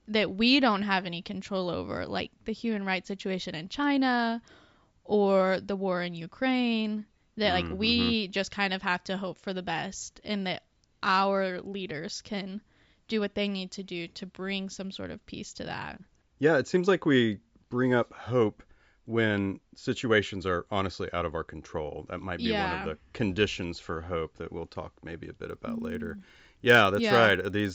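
From 25.45 s to the end, just after "maybe a", the resampler restarted on every block. The 16 kHz to 48 kHz conversion treated each 50 ms block in isolation, so the filter met a false edge instead of the real neighbouring samples every 50 ms. Each boundary leaves a small discontinuity, and together they form a regular ticking at 20 Hz, close to a low buzz, that sits on the speech and drops away when the signal pauses.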